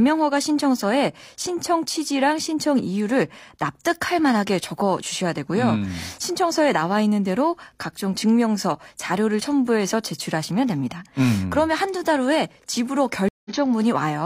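At 13.29 s a stream reconnect drops the speech into about 165 ms of silence; the restarted decoder resumes 46 ms earlier, repeating a sliver before continuing.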